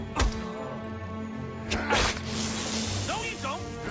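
Nothing in the audio stood out as a technical problem on listening.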